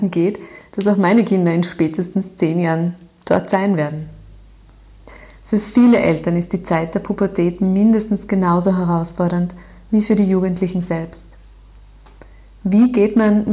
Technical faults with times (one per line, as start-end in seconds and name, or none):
none